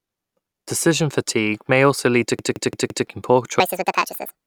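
Repeated buffer, from 2.39 to 3.07 s, just after "may also lead to": fresh audio failed to arrive, so the same 0.17 s chunk, which fits an 8192-sample buffer, plays four extra times with hard joins. It sounds like a rapid stutter, and about 0.7 s of the real audio is lost.

Section at the wrong speed, from 3.6 s to the end: the final stretch runs 1.73 times too fast, so pitch and tempo rise together by around ten semitones, making the speech hurried and chipmunk-high. A wrong clock during playback or editing is the likely cause.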